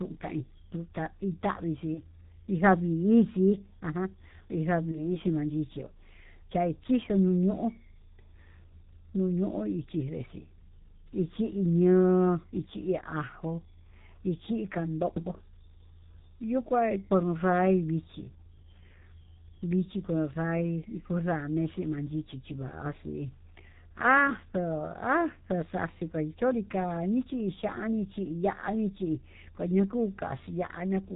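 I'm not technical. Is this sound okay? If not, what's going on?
No. The whole recording went through the G.723.1 codec, an old internet-phone squeezer, so the speech sounds muffled and rough, with smeared consonants. There's also VoIP packet loss concealed by the speech codec: around 1.94–2.01 s and 4.92–5.18 s, a tiny chunk went missing and the decoder guessed, giving a brief stretched, fading sound.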